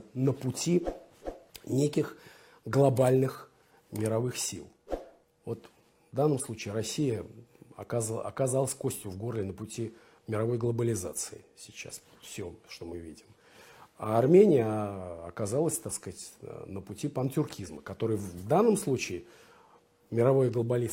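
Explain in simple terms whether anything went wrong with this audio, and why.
Nothing went wrong with this audio. There is no moment where the sound misbehaves, so there is nothing here that needs explaining or fixing.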